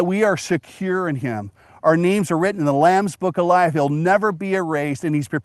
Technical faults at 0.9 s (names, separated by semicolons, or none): none